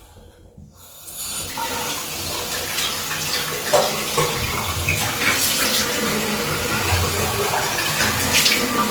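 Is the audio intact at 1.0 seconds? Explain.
No. At 1.0 s, as across the whole clip, the sound carries plainly audible Opus compression, likely in its fullband music mode at a rate that fits about 24 kbps. Starved bands are filled with folded or noise content, so tones turn grainy and rough rather than swirling as MP3 does. Bandwidth stays full, reaching about 20.1 kHz.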